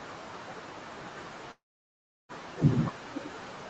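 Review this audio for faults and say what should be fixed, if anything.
Noise suppressor artifacts run through the whole clip: the background sinks between phrases. Unlike clipped speech, this affects the residual noise rather than the talker. Fix: use gentler suppression with smoother gain changes.

Speech cut by the noise suppressor occurs across 0.0 to 3.70 s, with dips of about 19 dB. Soft consonants and endings are swallowed as if they were noise, which differs from a freeze because the timing stays intact. Fix: lower the suppression aggressiveness or add better speech-presence protection.

A call audio freeze runs from 1.51 to 2.31 s. The sound stalls into a fading fill and then about 680 ms of silence. Nothing is lost; the audio simply resumes 777 ms late. The likely cause is delayed packets draining the jitter buffer. Fix: allow a deeper adaptive jitter buffer on this network.

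The noise suppressor is catching up at 2.58 to 2.85 s. The room noise rises by about 12 dB and first comes through with less reduction, then drops about 18 dB over 270 ms. This is a lag, not a dropout. Fix: speed up the suppressor's noise-estimate tracking.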